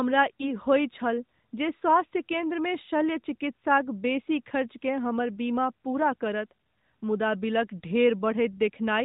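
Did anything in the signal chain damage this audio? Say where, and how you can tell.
Yes. Between 0.36 and 0.53 s the speech briefly dips and warbles, then returns a little weak and rough before it steadies. This is a lost AMR speech frame at the network stage. The gap sounds like a single 20 ms frame that failed its checksum over the radio link. The decoder filled it by reusing the previous frame's pitch and vocal tract settings at reduced gain, so the sound smears instead of cutting out. The AMR narrowband coding is audible throughout as the missing content above 4 kHz.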